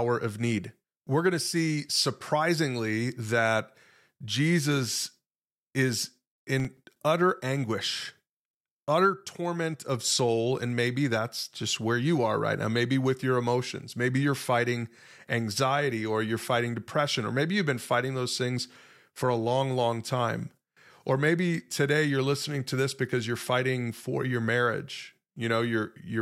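Processor overload crackle from 6.60 to 6.96 s, just before "utter anguish": missed buffer deadlines leave brief silent gaps, around 5 ms each, heard as gritty crackle.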